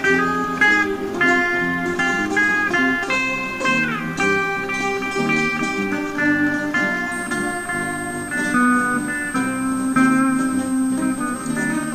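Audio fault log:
7.12–11.94 s, switching supply whistle: a high tone drifting between 8.35 and 8.51 kHz, roughly 15 dB below the signal, from a switching supply running in audible burst mode or beating with another.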